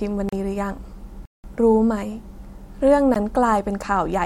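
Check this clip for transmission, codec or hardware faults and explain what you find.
Three blocks of digital silence interrupt the speech.

They fall at 0.29 s (about 35 ms), at 1.25 to 1.44 s (about 186 ms, which fits an 8192-sample block), and at 3.14 s (15 ms). The sound cuts abruptly to silence and returns unfaded. The short gaps are brief, and the long one is an audible hole. The waveform shows flat silent runs, and the spectrogram shows blank vertical strips.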